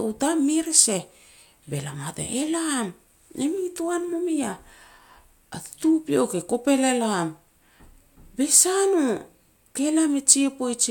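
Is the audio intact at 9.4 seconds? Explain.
Yes, the speech at 9.4 seconds plays through intact, with no audible fault at that point.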